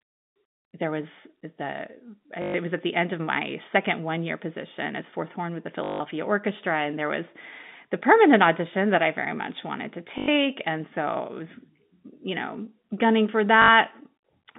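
Speech over a narrowband telephone line, band-limited to roughly 150 Hz to 3.7 kHz and carried with G.711 coding, suffers packet loss with the last packet repeated at 2.42 to 2.54 s, 5.84 to 6.00 s, 10.18 to 10.28 s and 13.62 to 13.68 s. Each gap (120, 160, 100 and 60 ms) is filled by looping the previous fragment, producing a robotic stutter whose buzz points to 20 ms packets.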